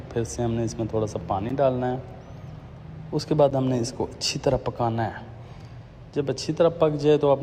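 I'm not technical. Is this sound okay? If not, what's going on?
No. There are two tiny dropouts, at 1.5 s and 3.51 s. Each is a gap between stream segments. The audio arrives in 2-second pieces. Their timing doesn't quite line up, so the player inserts about 11 ms of silence. Nothing is lost.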